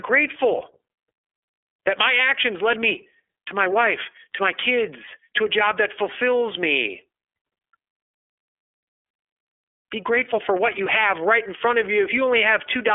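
iLBC codec damage runs through the whole speech clip: each roughly 30 ms frame is coded on its own, leaving a plainly rough, synthetic edge, and the band is held to about 300 Hz to 3.4 kHz, with nothing above 3.6 kHz, which fits the 13.33 kbps mode.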